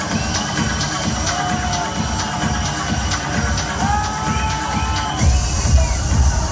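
Nothing stood out as a technical problem on listening to this recording.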